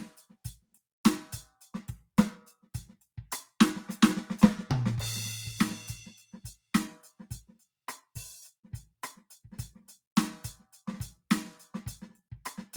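Twice in quick succession the music sags and then recovers: from 6.16 to 6.38 s the level falls by about 13 dB, and from 6.54 to 6.73 s by about 19 dB, each dip lasting roughly a fifth of a second. Both are sound cut by the noise suppressor, which mistook musical content for background noise and attenuated it more heavily than everything around it, leaving brief dips in level.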